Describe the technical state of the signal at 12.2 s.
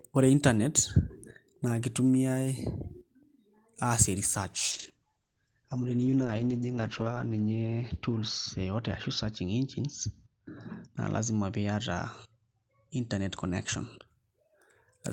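At 12.2 s the signal is inside a call bitrate drop that runs from 4.72 s to 14.13 s. The call's bandwidth estimate has fallen, so the encoder is coding with far fewer bits, which fits a cut from around 32 kbps down to 8 kbps. With so few bits, detail is quantised coarsely and the audio band shrinks from 20 kHz to 8 kHz, leaving the speech muffled, rough and watery until the rate recovers.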